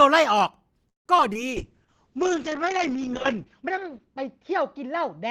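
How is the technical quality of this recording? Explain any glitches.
The quality is poor in the first half second of trouble and degraded for the rest of the clip, with a stall, two concealment glitches and a lasting loss of clarity.

From 0.89 to 1.07 s there is a call audio freeze: a brief continuation of the last sound dies into about 150 ms of near silence, likely because packets were delayed and the jitter buffer emptied. The audio then resumes where it stopped, about 160 ms late. A waveform shows a flat gap, and a spectrogram shows a blank vertical band.

Short concealed packet loss follows at 1.17–1.20 s and again at 1.33–1.51 s. Audio that arrived too late was replaced by an extrapolation of the preceding sound, heard as a small smear or wobble. On a spectrogram it appears as briefly smoothed, stretched harmonics or blurred noise, and the second episode adds a little extra length.

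From 1.52 s to the end there is a call bitrate drop. The encoder rate falls from 32 to 7 kbps, staying at the lowest level for about 1.75 s, and the bandwidth shrinks from 20 kHz to 8 kHz. The sound becomes muffled and watery. A spectrogram shows energy cut off sharply above 8 kHz, with coarser, blotchier detail below.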